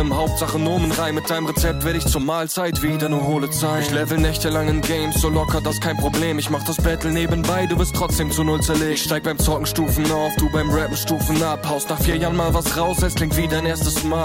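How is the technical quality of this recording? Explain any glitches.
The recording has one glitch. From 11.87 to 12.14 s there is processor overload crackle: several buffers of a few milliseconds each missed their deadline and dropped to silence, producing gritty tearing rather than one clean dropout.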